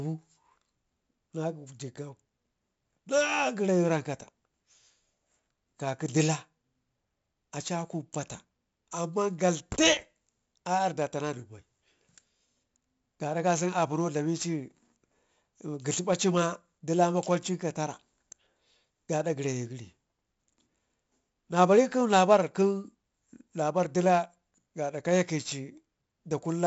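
Throughout, 4-bit ADPCM compression codes each sample as a coarse predicted step, so loud speech carries heavy gritty hiss, attacks distort, and nothing sounds above 7.7 kHz.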